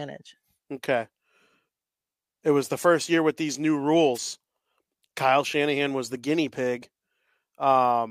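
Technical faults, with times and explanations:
4.14 to 4.19 s, wireless microphone noise hit: right after "year with these new" there's a quick swish of static, about 50 ms. The mic's FM signal briefly faded as reflected copies cancelled at the receiver, so its hiss surged over the speech.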